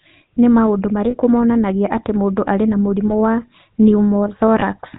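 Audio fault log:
throughout: GSM full-rate codec. The speech was squeezed through a vocal-tract model excited by sparse, regularly spaced pulses, which fits the 13 kbps full-rate coder. Nothing above 4 kHz survives, leaving a plainly audible buzzy, gravelly roughness on the voice.
1.10–1.15 s, 3.08–3.11 s, 4.60–4.63 s: lost GSM frames. Damaged frames were concealed by repeating the last good frame's settings, about 40 ms at the first point and 20 ms at the others, which fits two frames and then single frames. Each gap becomes a brief rough, metallic ring in place of the real sound.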